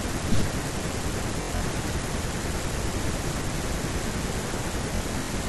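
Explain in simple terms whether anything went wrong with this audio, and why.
Bluetooth stutter hits the speech at 1.42 to 1.61 s and 4.96 to 5.29 s. Data arrived late or went missing, so tiny slices repeated as a buzz, then the speech skipped ahead.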